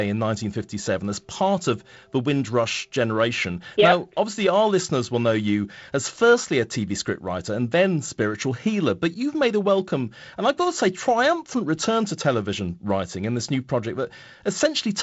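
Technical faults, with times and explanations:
No technical faults; the speech has come through G.722 wideband telephone coding at 48 kbit/s, which leaves nothing above 7.7 kHz and only the light coding grain expected at that rate.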